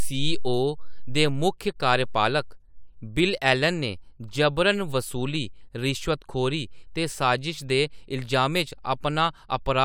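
No faults detected in the speech; nothing audible to flag.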